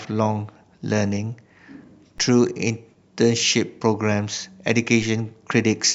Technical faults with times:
2.18 DC step
5.02 DC step

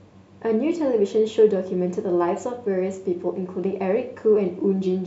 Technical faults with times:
none

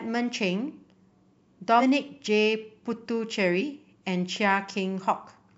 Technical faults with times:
1.79-1.82 compressed frames skipped
3.60-3.64 compressed frames skipped

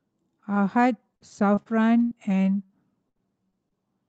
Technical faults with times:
0.55-0.57 lost packet rebuilt from error correction
1.15-2.71 repeated packet loss (robotic sound)
3.09-3.73 repeated packet loss (robotic sound)

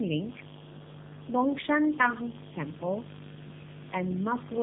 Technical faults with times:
0.00-4.63 mains buzz
0.00-4.63 tandem speech coding

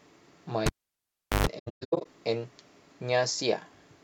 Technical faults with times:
0.66-1.47 cable pulled and plugged in
1.58-2.07 AAC frame loss with muting

